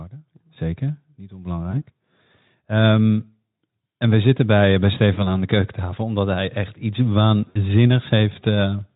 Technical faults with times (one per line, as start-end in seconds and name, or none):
1.72-1.83 VoIP packet loss concealed by the speech codec
5.14-5.29 VoIP packet loss concealed by the speech codec
7.49-7.60 VoIP packet loss concealed by the speech codec